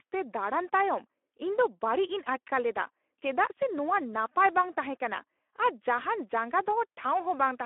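Speex codec damage runs through the whole speech clip. Speex is a CELP coder that rebuilds speech from a predicted filter and a coded excitation, and here that excitation is starved of bits, which fits a low setting around 11 kbps. The speech sounds plainly noisy and hoarse. The band is also confined to a telephone-like 300 Hz to 3.5 kHz line, with nothing above 3.8 kHz, so the sound is muffled and narrow.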